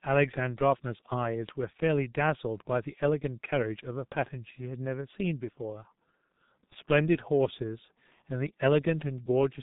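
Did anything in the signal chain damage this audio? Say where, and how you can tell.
Yes. The damage is at the codec stage: the speech carries the G.723.1 codec's heavy coding damage throughout. It is muffled with nothing above 4 kHz, hoarse, and the consonants blur together, which fits a bitrate around 6 kbit/s. A plain low-pass filter would only dull the sound. Here the 30 ms frames and slowly updated voice model smear the fast transitions too. The faint room noise, about 49 dB below the speech, is part of the recording.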